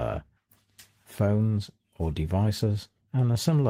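Nothing stood out on listening to this recording.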